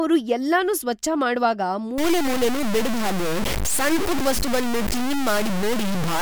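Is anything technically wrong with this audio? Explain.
Yes. From 1.98 s, right after "ಎಲ್ಲನೂ ಸ್ವಚ್ಛ ಮಾಡ್ವಾಗ", to the end at 6.22 s, the speech turns harsh and grainy, with distortion nearly as loud as the voice that shifts with it. This is likely low bit depth without dither: truncation to about 3 bits, so the error tracks the signal.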